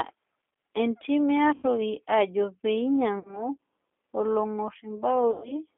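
Throughout, G.729 coding at 8 kbit/s gives rough, synthetic speech. The spectrogram shows energy confined to roughly 250 Hz to 3.5 kHz, with smeared harmonics.

VoIP packet loss concealed by the speech codec occurs at 1.54–1.66 s after "entim e", at 3.19–3.49 s, and at 5.31–5.53 s. The decoder extrapolates a fading buzzy tone or coloured noise over gaps of 90, 60 and 120 ms, which fits three, two and four lost packets. On the waveform these appear as decaying, repetitive cycles, and the spectrogram shows flat, frozen bands.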